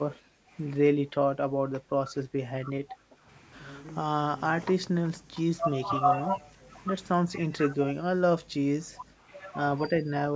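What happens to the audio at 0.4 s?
Background gated by the echo canceller, from 0.19 to 0.5 s: the canceller ducked the microphone while the far end played, dipping the room sound by about 9 dB before releasing.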